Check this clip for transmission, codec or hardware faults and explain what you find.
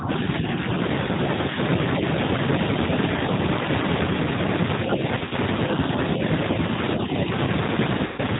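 Three problems show up here: the whole clip runs through a low-bitrate speech codec, the opening half-second gets pushed down, and there are two dropouts near the end.

The G.729 codec colours everything from start to finish. This is the 8 kbit/s G.729A variant, and the damage is plainly audible. The codec doesn't send the waveform itself. It rebuilds the speech from a vocal tract filter, a pitch predictor and a few pulses per frame. Everything above 4 kHz is gone, so the speech sounds dull and a bit rough and synthetic, though it stays intelligible.

From 0.0 to 0.57 s the speech dips in and out, losing about 15 dB at the worst point and roughly 150 ms in total. The likely cause is speech suppressed in double talk. When both ends talk at once, an echo canceller can't tell the near talker from the loudspeaker echo, so it turns both down. That gives a choppy, ducked start instead of a steady level.

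There's VoIP packet loss concealed by the speech codec at 5.15 to 5.35 s and again at 8.06 to 8.21 s. The first patch is scattered: 80 ms missing across 160 ms, with no gap longer than 20 ms, which fits about four lost 20 ms packets. The second loses 120 ms, about six packets. In each case the decoder keeps extending the last pitch and filter while fading the gain. You hear a buzzy tone or coloured noise that dies away, and the speech stays weak for a moment after the packets return.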